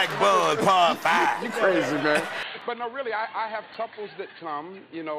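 At 2.43 s the audio abruptly turns dull and boxy and stays that way to the end, with no gap at the change. This was likely an input switched to a poorer device. On a spectrogram, everything above 4.5 kHz vanishes at that point, leaving a hard ceiling. The waveform shrinks by about 10 dB, and a new noise floor appears roughly 30 dB below the signal. Two blocks of digital silence also punch through, at 2.61 s (2.9 ms, which fits a 128-sample buffer left unfilled) and at 3.74 s (about 4 ms). Each is heard as a tick. In the waveform, each shows as a flat line near zero with sheer edges, and on the spectrogram as a thin vertical broadband stripe from the clicks at its boundaries.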